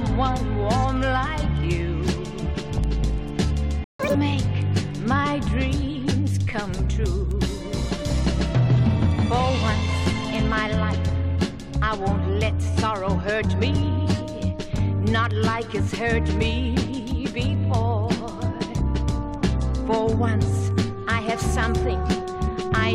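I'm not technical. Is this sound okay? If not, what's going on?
No. There is a playback stall at 3.84 s. The sound cuts out for about 0.15 s, a short but noticeable gap. The player likely ran out of data or was briefly held up, so the output went silent until it recovered.

Right after, from 3.99 to 4.15 s, there is catch-up at higher speed. The player rushes through what it missed at twice normal speed. For that moment the sound jumps up sharply in pitch, nearly an octave, then drops back to normal.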